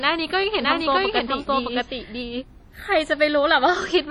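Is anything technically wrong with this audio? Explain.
Yes, the speech has two technical faults.

WMA compression runs through the whole clip and is the likely cause of the heavy codec damage heard throughout. This transform codec works on long blocks, so its quantisation noise smears over tens of milliseconds, and weak spectral lines are dropped entirely, which fits a low bitrate around 32 kbps. The result is ringing, washy speech with a hiss that swells and shrinks along with the signal.

A doubled audio track appears from 0.62 s to 2.44 s. A second full-band copy of the same speech is mixed in, trailing the original by roughly 0.7 s at about the same level. The likely cause is either a slower second capture path or an edit holding two misaligned copies. The copy has no decay or room colouring, and it starts and stops abruptly at those times.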